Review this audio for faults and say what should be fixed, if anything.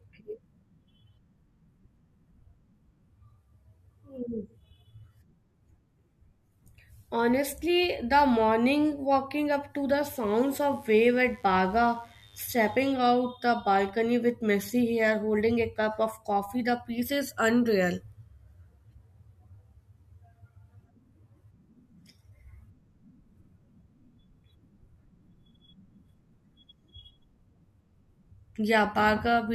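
A mains buzz runs from 10.06 to 12.85 s, starting after "walking up to the" and clearing before "out the balcony with". It is a steady, raspy tone about 35 dB below the speech, built on 50 Hz. Sharp switching spikes, such as those from a dimmer, rectifier or unshielded cable, enter the signal path twice per mains cycle. Their harmonics stack up from 50 Hz into the kilohertz range. Keep dimmers and switching supplies off the recording circuit, and use shielded, balanced cabling routed away from mains wiring.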